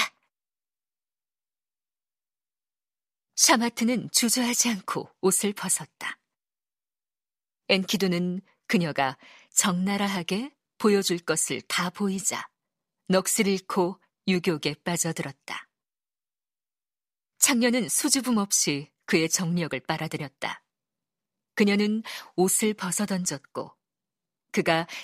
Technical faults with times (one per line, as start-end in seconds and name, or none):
none